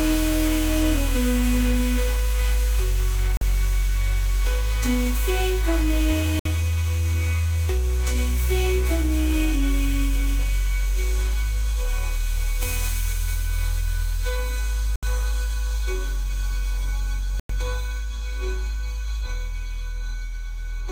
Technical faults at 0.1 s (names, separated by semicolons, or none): none